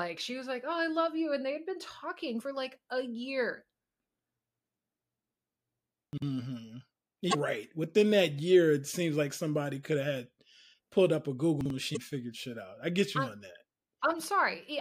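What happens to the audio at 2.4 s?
Damaged data in a compressed stream hits the speech from 2.37 to 2.41 s, a glitch about 40 ms long. At that point some of the compressed bytes are corrupt, so the decoder cannot read those frames correctly. It loses its place in the stream and has to hunt for the next valid frame header before normal decoding resumes. What comes out is a short, harsh chirp or blip that briefly breaks into the speech.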